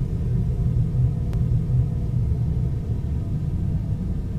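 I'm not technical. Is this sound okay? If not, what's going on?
No. At about 1.33 s there is a CD skip: the player's laser jumped to a different turn of the disc's spiral, so the sound cuts out for a few thousandths of a second, then resumes from a different spot.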